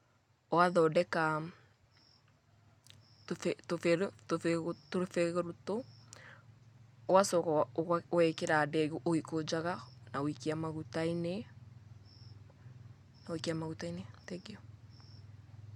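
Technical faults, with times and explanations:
Nothing technical to flag here; the speech runs along without any audible trouble in the recording or playback.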